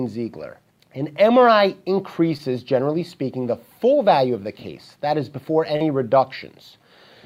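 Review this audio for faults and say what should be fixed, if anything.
Short concealed packet loss occurred twice. 20 ms of audio missed the decoder at 2.37 to 2.41 s, and 40 ms at 5.77 to 5.82 s. Each time the receiver extended the preceding sound to bridge the gap, then blended back, leaving a brief smear or wobble. To prevent this, add forward error correction or redundant packets, and give the jitter buffer enough depth to absorb late arrivals.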